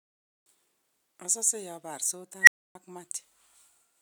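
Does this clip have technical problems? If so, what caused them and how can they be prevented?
Yes, there's an unstable filter at 2.42 s. A tone around 2 kHz swells within about 57 ms, clips, then the audio cuts out for 280 ms until 2.75 s. To prevent it, check recursive filter coefficients for stability before they go live.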